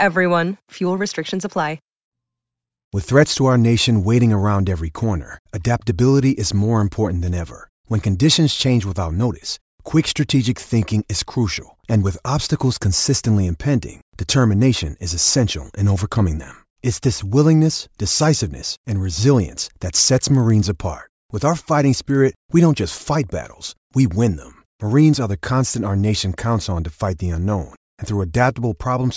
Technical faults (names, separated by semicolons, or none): resampler restarted on every block